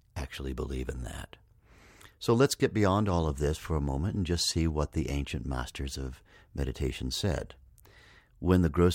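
From 0.18 s to 8.93 s, faint clock slip clicks tick steadily through the speech, roughly every 0.15 s, around seventy in all. Each one is a single sample dropped or repeated. The likely cause is two unsynchronised clocks drifting apart by about 150 ppm.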